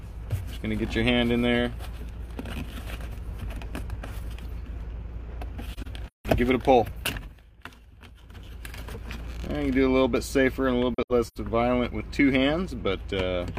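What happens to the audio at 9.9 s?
Nothing goes wrong at 9.9 s; the audio carries straight through that moment intact, with no dropout, click, glitch or other audible fault.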